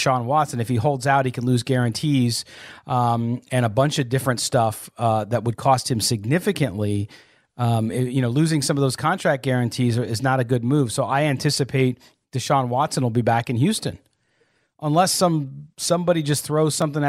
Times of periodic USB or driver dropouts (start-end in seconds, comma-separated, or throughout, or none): 14.77-16.82